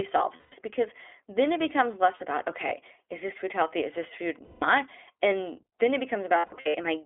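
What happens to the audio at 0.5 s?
From about 0.36 to 0.54 s the sound turns into a held, slightly buzzy and breathy drone that fades before clear speech returns at "because then it becomes". These are lost iLBC frames. Packets went missing, and the decoder filled the gap by repeating the last pitch cycle mixed with noise, letting it decay as the loss went on. The roughly 160 ms of missing audio fits a run of consecutive 20 ms frames. Because each iLBC frame is decoded on its own, the audio recovers almost immediately once packets arrive again.

Underneath this moment the audio also carries the iLBC codec itself, at 15.2 kbps. The band is held to the telephone range of 300 Hz to 3.4 kHz, so everything above is gone and the low end is thin. The coding damage is plainly audible as a rough, slightly synthetic texture. This comes from the codec modelling each 20 ms frame's excitation independently at a low bitrate rather than reproducing the waveform exactly.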